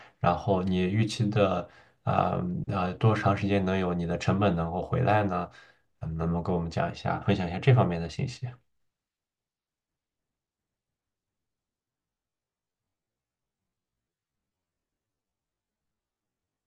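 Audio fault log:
11.82–16.67 s, time-stretched section: software likely slowed this part to 0.53 speed by repeating short pieces, so speech abruptly drags at about half pace, with unchanged pitch.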